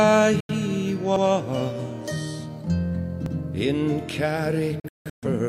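Digital broadcast dropouts occur at 0.40 to 0.54 s and 4.80 to 5.28 s. The receiver lost valid frames and muted with a 3 ms fade. First about 85 ms went missing, which fits two lost frames. Later several holes totalling about 341 ms are scattered across roughly 470 ms, the longest about 171 ms. Overlapping chunks cause repeats at 1.16 to 1.26 s and 3.26 to 3.36 s. The audio was handled in 2 s chunks, each starting before the previous one finished, so 100 ms plays twice at each join, heard as a stutter.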